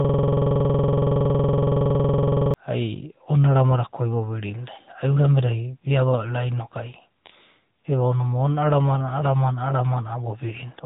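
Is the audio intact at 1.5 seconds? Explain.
No. At 1.5 s the audio is caught in a system hang loop, running from the start of the clip, already under way, to 2.54 s. The machine stalled while the audio hardware kept replaying the same 46.44 ms stretch, which fits a 2048-sample buffer. It repeats dozens of times and produces a stutter-like buzz at 21.5 Hz.

The same moment also carries the AMR narrowband mobile codec damage present across the whole clip. Nothing above 3.8 kHz survives, so the sound is muffled and band-limited. The low-bitrate vocal-tract model adds a buzzy, synthetic edge, which points to a mode around 10 kbps.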